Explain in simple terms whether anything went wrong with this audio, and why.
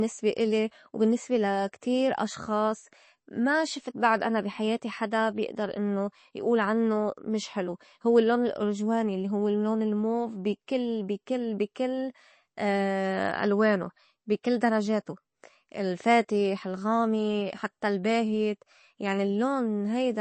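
The sound was most likely squeezed hard by MP3 compression, which throws away detail to save space. Throughout the speech, nothing above about 8.3 kHz survives, so it sounds dull, and it swirls and warbles, with s sounds turning metallic.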